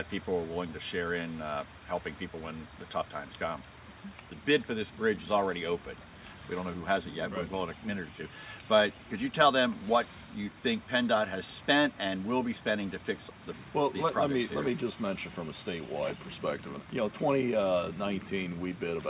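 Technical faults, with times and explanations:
No technical faults heard.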